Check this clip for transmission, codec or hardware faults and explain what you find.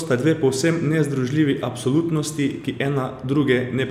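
Listening through the recording, nothing stood out that points to a problem in the transmission path, the encoding or the equipment.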